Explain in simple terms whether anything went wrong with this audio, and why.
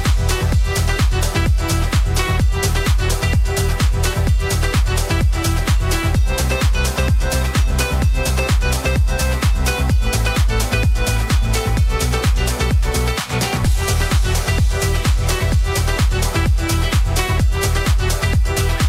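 Nothing went wrong that I could hear; on listening, nothing in the audio stood out as a problem.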